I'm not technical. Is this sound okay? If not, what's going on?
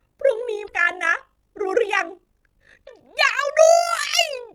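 No. There is overlap-add ripple all the way through this speech. The audio was cut into short overlapping slices and joined back together. The slices were not blended evenly, so the loudness rises and dips with each slice. That happens about fifty times a second. You hear it as a fast, buzzy flutter, like a robotic tremolo laid over the speech. The dips are deep.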